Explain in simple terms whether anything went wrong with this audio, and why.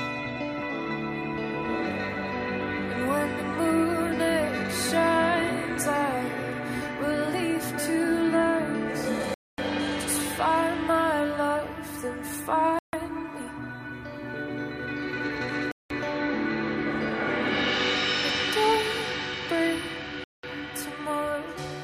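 The sound drops to brief silence four times, at 9.34, 12.79, 15.72 and 20.24 seconds, for 0.14 to 0.24 seconds. A Bluetooth stall is the likely cause.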